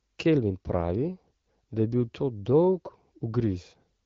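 Speech recording, with no technical faults to be heard.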